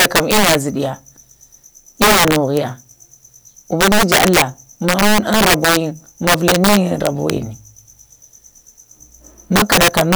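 Speech, with integer overflow breaking up the loudest passages at 0.00–0.55 s, 2.02–2.57 s, 3.81–4.42 s, 4.89–5.77 s, 6.27–7.30 s and 9.56–10.15 s. The signal is driven about 5 to 10 dB past full scale, and instead of being held at the limit each peak wraps to the opposite extreme, giving harsh cracks far sharper than clipping. On a waveform, peaks jump rail to rail in vertical lines; a spectrogram shows broadband vertical streaks.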